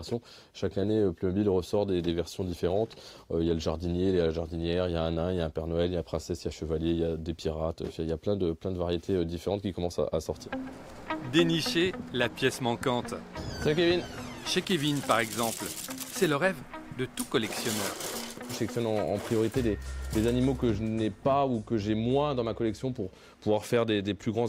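For the first 6.0 s the audio suffers from an adaptive stream starting at a low bitrate. The treble is thin or synthetic and codec artefacts are heavier, which fits a low-rate Opus rendition near 32 kbit/s. At 6.0 s quality jumps abruptly, with no gap, consistent with a switch to roughly 64 kbit/s.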